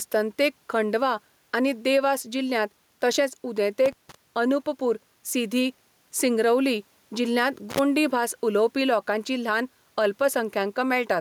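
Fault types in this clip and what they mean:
Gain pumping: The level is pulled down whenever the talker gets loud, with a swing of roughly 5 dB, so loud and quiet passages end up squashed close together. That's most likely the input gain set far too high, with a fast limiter or compressor clamping down on each peak. The room noise sits about 45 dB under the speech.
Intermittent contact: Twice the signal drops out as if a plug or cable lost its connection for a moment, with a bit of crackle at each edge and faint hiss in the gap. The first runs from 3.86 to 4.15 s, with the line open for about 160 ms. The second, shorter one is at 7.70 to 7.79 s, open for about 60 ms, right after "सिंगरौली जिल्ह्यांत" and just before "भास उलोवपी लोकांची ल्हान".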